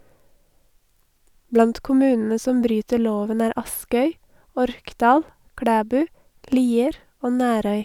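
No technical faults can be heard anywhere in the recording; the signal holds steady throughout without any audible disturbance.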